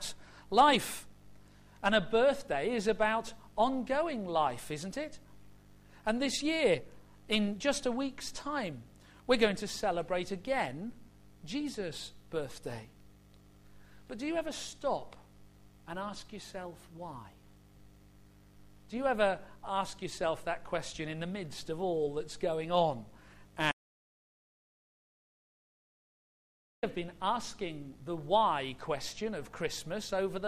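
An audio dropout to silence runs from 23.72 to 26.83 s, taking out about 3.1 s of the sound. The input likely went missing, from a disconnected device, a failed link or an unintended mute, while recording carried on writing silence. The sound breaks off abruptly and resumes just as abruptly, and the gap between is dead silence with no room tone at all. Whatever occurred during those seconds is lost.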